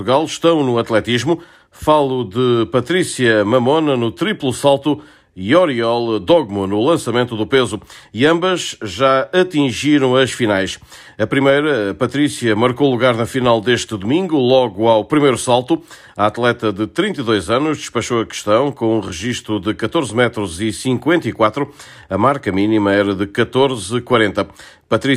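No technical faults are audible.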